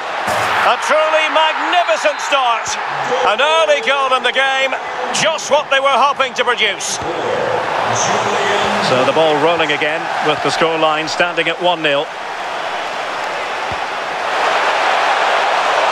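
Nothing here calls for a fix: I listened all the way and there's no dropout, glitch or defect in the audio to point to.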